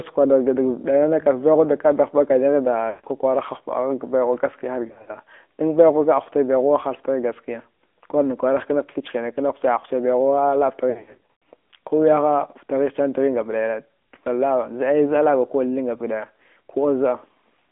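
Throughout the speech, the AMR narrowband mobile codec limits the line to roughly 250 Hz to 3.5 kHz, so the sound is thin and boxy with nothing above 3.5 kHz. The coder rebuilds each 20 ms frame from a vocal tract model excited by a few pulses. That leaves a plainly audible buzzy, synthetic edge, and the degree of coarseness fits a mid-rate mode near 10 kbps.

Lost AMR speech frames break the line three times. From 2.90 to 3.05 s, 140 ms is lost in one stretch. The decoder repeats its last pitch and vocal tract settings at falling gain, so the sound smears and sags before recovering. From 4.88 to 5.11 s, 140 ms of loss is scattered over 200 ms, with runs of up to 60 ms. This gives a choppy warble just before "dan baighuwa". From 10.90 to 11.45 s, 380 ms is lost across 560 ms, with runs of up to 100 ms. These longer gaps fade almost to silence, and the speech returns weak and rough.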